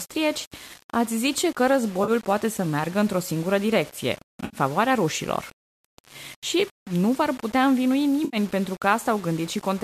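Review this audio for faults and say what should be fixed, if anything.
Throughout the speech there is a coarse, grainy distortion whose texture moves with the voice: louder syllables carry a rough fizz, and the quietest tails break up and sputter instead of fading smoothly. This is low bit depth without dither, likely from rounding to about 6 bits, with the error sitting only about 25 dB below the signal. Unlike steady hiss or codec noise, the grain stops when the sound stops and changes character with each syllable, because the rounding error is tied to the waveform itself. To prevent it, keep at least 16 bits through the chain and add dither whenever word length is reduced.

Three short patches sound smeared and phasey rather than clean: 2.04 to 2.11 s (about 40 ms), 4.45 to 4.57 s, and 8.25 to 8.37 s (about 80 ms each). This is AAC frame loss with concealment. When frames go missing, the decoder fills the gap by reusing the last good spectrum, so the result is a blurred, noisy smear instead of a hard gap. 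The durations fit four and eight lost 10 ms frames from the low-delay AAC stream. Plain packet dropouts give abrupt silence or clicks, whereas here the spectrum is stretched across the hole. To prevent it, use a deeper jitter buffer, forward error correction or retransmission on the transport.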